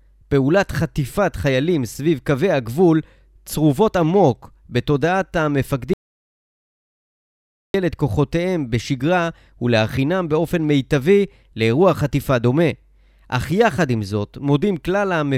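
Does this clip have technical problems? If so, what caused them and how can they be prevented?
Yes. An audio dropout to silence runs from 5.94 to 7.74 s: about 1.8 s of silence with no room tone, likely from lost input while recording continued. Secure cables and disable stray mutes.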